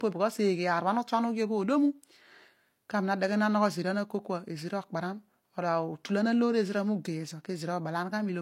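Low-bitrate audio saved at a high bitrate runs throughout this speech, with nothing above 16.3 kHz. The speech was likely squeezed by a low-bitrate codec first, and the later MP3 copy cannot restore what was lost.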